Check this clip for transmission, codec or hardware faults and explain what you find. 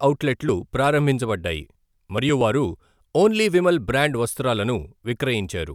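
No faults detected in this clip.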